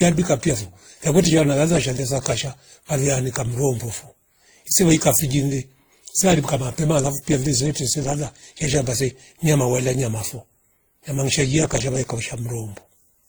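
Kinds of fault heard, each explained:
Transcoding between lossy codecs, throughout: the speech carries two overlapping sets of coding artefacts, which likely come from a WMA stage near 48 kbit/s followed by Opus near 24 kbit/s, the second encoder spending bits on the first one's artefacts while adding its own. Nothing remains above 20.1 kHz.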